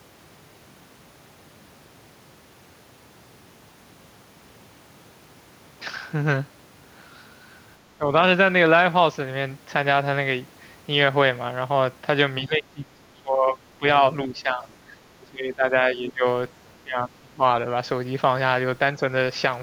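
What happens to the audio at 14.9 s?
From 14.88 to 15.07 s the speech is pulled down by roughly 10 dB for about a fifth of a second. This is speech suppressed in double talk, likely an echo canceller mistaking the talker for loudspeaker echo. Unlike a dropout, the level dips rather than falling to silence.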